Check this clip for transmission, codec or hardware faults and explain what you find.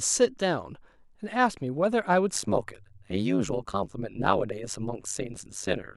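One fault is present, affecting the latter part of the speech. Overlap-add ripple runs from 2.35 s to the end. The audio was split into windowed frames and rebuilt with overlaps that don't sum to a constant gain, so the level dips by about 60 dB once per frame, at around 100 Hz. This produces a harsh, metallic buzz with extra tones around the speech.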